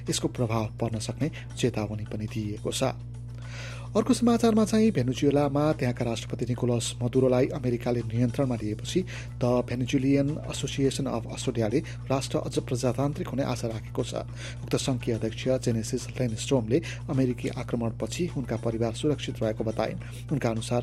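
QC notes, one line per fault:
Throughout, mains hum: a steady low tone at 60 Hz sits under the whole clip, loud enough to be plainly heard at roughly 10 dB below the signal, with some low harmonics above it. Power-line current leaking into the signal path, through a ground loop or a nearby transformer, produces this fixed pitch. Unlike rumble, it holds a single unwavering frequency, and unlike buzz it stays a smooth, rounded tone without a bright, rasping edge.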